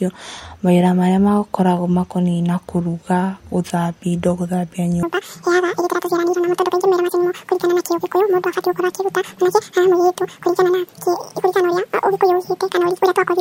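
Speech that, from 5.03 s to the end at 13.41 s, is audio read two samples at a time: playback runs at 2x speed and 12 semitones higher. A spectrogram shows harmonics jumping up an octave, while the waveform looks horizontally compressed.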